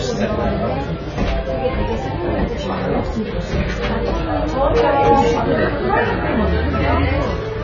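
Throughout the clip, heavy AAC compression, likely AAC-LC at a bitrate near 16 kbps, removes everything above 7 kHz, leaving the sound dull and smeared.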